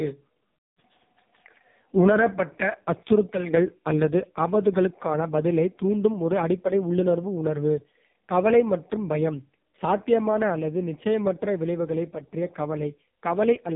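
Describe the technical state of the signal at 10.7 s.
At 10.7 s the speech carries AMR narrowband mobile codec damage throughout, buzzy and synthetic, fitting the lowest bitrate mode. A spectrogram shows everything cut flat above 3.7 kHz.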